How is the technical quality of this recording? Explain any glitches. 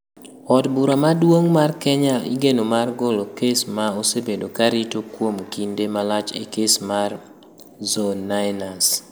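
The technical quality of this recording is sound, with no glitches to explain.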